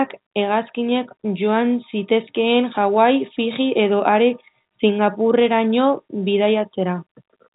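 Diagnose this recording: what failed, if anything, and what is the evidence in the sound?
Nothing in the recording points to a failure at any stage of the chain. The speech has been carried through G.711 telephone coding, which shows up as a telephone-band sound with nothing above 3.8 kHz.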